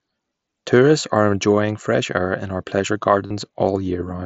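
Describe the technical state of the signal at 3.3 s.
Concealed Bluetooth headset packet loss occurs from 3.27 to 3.31 s, right after "air in our pleasure". For roughly 37.5 ms, consistent with a short run of lost headset packets, the receiver filled the gap by repeating the closest-matching stretch of the preceding waveform. That substitution holds the level steady but turns the sound into a brief buzzy, tonal sustain, with a slight warble as genuine audio resumes within the 8 kHz mSBC wideband band.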